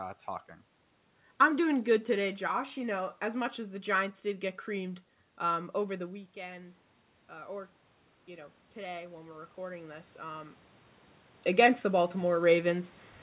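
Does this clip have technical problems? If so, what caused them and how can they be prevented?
Yes. Automatic gain rising from 5.97 s to 10.6 s, just after "get creamed um over": the voice fell about 13 dB at the microphone when the talker moved back, so the gain control slowly raised its gain by about 8 dB over several seconds. Voice and room noise swell together, and the level never fully recovers before the talker moves again near 10.5 s. Fixing microphone distance or slowing and capping the AGC would prevent it.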